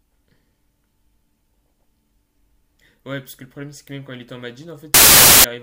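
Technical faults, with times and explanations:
4.94 to 5.44 s, samples built from the wrong bytes: for roughly half a second near the end, the speech gives way to a harsh blast of loud broadband noise. The reader has put each sample together from the wrong bytes. Maybe it's off by one, maybe the byte order got swapped, maybe it's assuming the wrong alignment. Whatever the exact slip, the fast-jittering low bits end up as the big part of every value, so you get a wall of hiss where the speech was.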